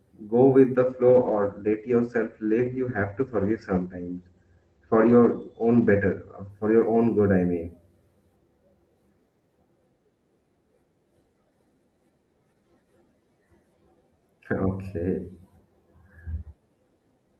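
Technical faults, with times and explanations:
0.77–7.69 s, call bitrate drop: just after "go with", the call's bandwidth estimate collapsed and the encoder was told to spend far fewer bits, which fits a fall from about 48 kbps to about 13 kbps. With so little data, the codec quantises coarsely and narrows the audio band from 20 kHz to 8 kHz. For about 5.6 s the speech sounds dull, muffled and watery, losing its crisp sibilance until the bitrate recovers.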